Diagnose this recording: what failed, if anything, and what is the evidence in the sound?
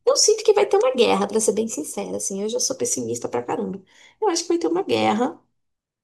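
From 0.43 s to 2.78 s the speech plays about 6.4% fast and roughly a semitone sharp (about 107 cents), then drops back to normal pitch and pace in one step. On a spectrogram the harmonic stack sits uniformly higher across that span and then falls abruptly at 2.78 s; the waveform shows syllables compressed in time. The likely cause is a drift correction step at the driver or buffer stage, where clock-matching software briefly raised playback rate to drain its buffer.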